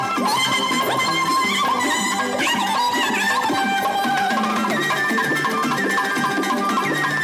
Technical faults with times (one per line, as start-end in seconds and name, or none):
0.00-7.24 wrong sample rate